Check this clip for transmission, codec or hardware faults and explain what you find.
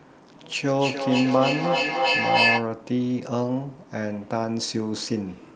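One fault stands out: feedback echo between two devices, from 0.71 to 2.76 s. Two devices in the same space share the call, so one plays back what the other's microphone sent, and that microphone captures it again; neither echo canceller touches the other device's output. Each syllable returns roughly every 300 ms, thinner and more ringing, and the repeats build up, peaking about 4 dB above the speech. On a waveform this appears as evenly spaced copies that grow rather than decay; a spectrogram shows stacked, smeared repeats with narrowing, ringing bands.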